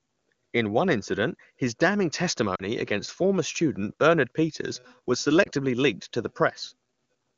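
At 2.55–2.63 s and again at 5.44–5.48 s, lost AMR speech frames: the decoder repeats the last pitch with falling gain, giving a brief dip that fades toward near silence in the two-frame run. The spectrogram shows smeared, fading harmonics, and the waveform a dip, fitting two frames and one frame of 20 ms.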